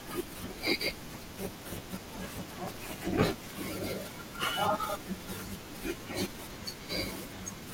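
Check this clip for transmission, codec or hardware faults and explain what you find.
There's one fault. From 1.33 to 3.59 s, overlap-add ripple: frames rejoined with mismatched overlap make the level pulse about 11 dB at roughly 400 Hz, a rough robotic buzz.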